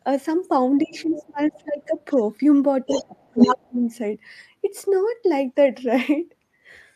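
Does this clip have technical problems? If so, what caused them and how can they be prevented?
Yes. Speech suppressed in double talk occurs at 0.84–1.97 s, 2.87–3.17 s, 3.34–3.39 s and 3.55–3.8 s. The speech dips sharply while another voice overlaps it, by roughly 25 dB in the first stretch and up to about 40 dB in the last. The likely cause is an echo canceller that could not tell the local talker from loudspeaker echo and attenuated both at once. To prevent this, use an echo canceller tuned for full-duplex operation, or a headset.

The other side's voice leaking through is heard at 0.95–1.25 s, 1.97–2.22 s, 2.86–3.04 s and 3.2–3.56 s. A second voice sits about 15 dB below the speech in the first and third stretches and is faint, around 35 dB down, in the second. In the last stretch it is slightly louder than the speech. This is likely loudspeaker playback picked up by the microphone that the echo canceller failed to remove. 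To prevent it, lower the loudspeaker volume, increase the distance between the microphone and speaker, or switch to headphones.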